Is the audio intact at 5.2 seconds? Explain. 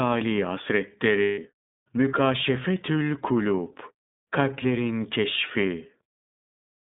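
No. At 5.2 s the speech carries the iLBC codec damage present throughout the clip. Each 30 ms frame's excitation is coded independently, which fits the 13.33 kbps mode, and the band is held to about 150 Hz to 3.7 kHz, giving a narrow, rough, synthetic sound.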